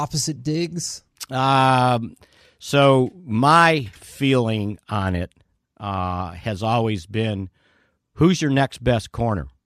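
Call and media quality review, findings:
No technical faults were found in the speech signal; capture, transmission and playback show no detectable defects.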